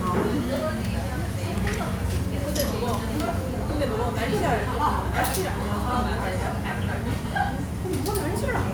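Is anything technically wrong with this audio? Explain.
No, nothing technically wrong can be heard here.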